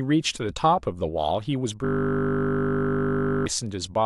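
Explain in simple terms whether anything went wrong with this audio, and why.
From 1.85 to 3.46 s the speech becomes a buzz. It's a system hang loop. The frozen computer replayed one 20 ms snippet, fifty times a second.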